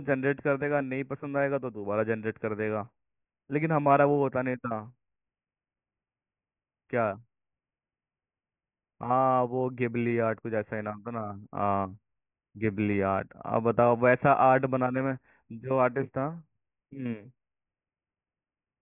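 No technical faults can be heard anywhere in the recording. Nothing in the audio calls for a timestamp or closer listening.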